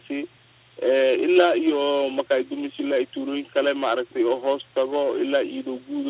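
No technical faults turn up in time order here; the audio carries nothing above 4 kHz, which fits a narrowband call path such as G.711 mu-law at 64 kbps.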